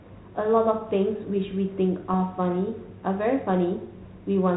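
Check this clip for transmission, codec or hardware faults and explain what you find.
One transmission fault stands out in this speech clip, heard over a telephone-band ADPCM path whose sound fits 32 kbit/s G.726. Between 2.09 and 2.14 s there are bit errors on an ADPCM link. Flipped bits, at a low rate of around a tenth of a percent, knock the decoder's step size and predictor off track, so each error rings on briefly as a pop and rough burst with a sudden level jump. A waveform shows short spiky, uneven bursts. A spectrogram shows broadband vertical smears up to the 4 kHz band edge.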